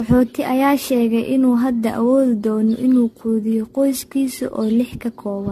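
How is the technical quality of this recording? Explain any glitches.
The recording is degraded throughout by one fault. Generation loss runs the whole clip: the speech sounds swirly, smeared and hollow, with blurred attacks and nothing above 14 kHz. The likely cause is repeated lossy re-encoding, around ten passes through a codec consistent with 64 kbit/s AAC-LC. Each pass requantises on a shifted frame grid, so noise and spectral gaps accumulate.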